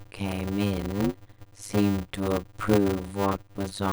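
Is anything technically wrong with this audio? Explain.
Yes, there's a block size mismatch (padded) throughout the speech: short blocks, which fits 256-sample writes, get zero-filled gaps, giving a 100 Hz buzz and slowing everything to about 0.53x with the timbre kept.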